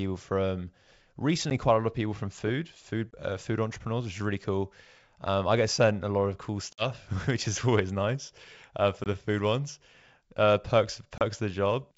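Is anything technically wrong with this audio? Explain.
Yes. This speech has packet loss on an ADPCM call at 1.50, 3.11–3.17, 6.73–6.88, 9.04–9.07 and 11.18–11.22 s. About 10 to 50 ms drops out each time, which fits 10 ms packets. The receiver fills each gap with silence, so there are hard-edged holes. Its adaptive predictor and step size then lose track of the sender's, so the speech comes back slightly distorted before it settles. The G.722 wideband coding at 64 kbit/s is clear to 7 kHz.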